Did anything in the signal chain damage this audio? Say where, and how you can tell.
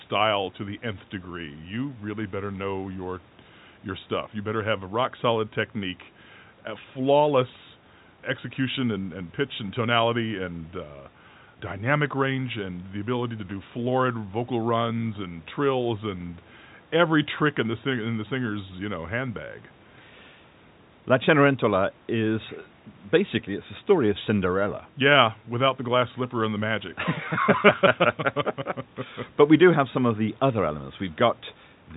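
No, the speech carries only the expected character of a G.711 telephone path, with nothing above about 3.8 kHz and the band limit and low-level companding texture you would expect from a 64 kbps telephone channel, and no stage in the chain has added damage beyond that.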